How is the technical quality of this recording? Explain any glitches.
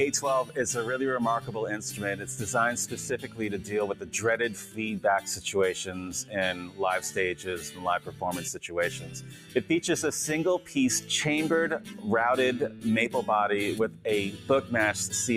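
The technical quality is compromised by a speech-oriented noise suppressor processing non-speech audio. Treating steady tones, ambience and decay as noise, it swings the level by around 10 dB throughout, so the sound pumps and thins.

In seven places the sound gets cut by the noise suppressor, which pulls sustained content down while sudden attacks pass. This happens at 1.4–4.13 s (about 9 dB deep), 6.24–6.8 s (about 9 dB), 7.38–9.63 s (about 8 dB), 10.6–11.1 s (about 8 dB), 11.79–12.05 s (about 7 dB), 12.69–12.85 s (about 7 dB) and 13.88–14.71 s (about 9 dB). Held sound sinks and tails end early.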